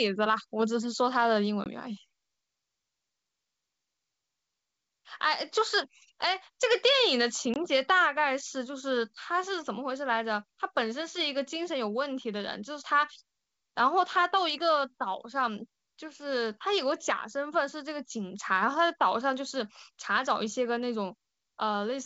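A speech recording on a wideband call, with the light upper-band hiss and clear 7 kHz bandwidth of G.722 coding, which points to the 64 kbit/s mode, has two brief hard-edged holes, at 1.64 to 1.68 s and 7.54 to 7.57 s, each followed by slightly distorted speech before the sound settles. This is packet loss on an ADPCM call: about 20 ms, roughly a single packet, went missing each time and was filled with silence, leaving the decoder's predictor and step size out of step with the sender's until they reconverged.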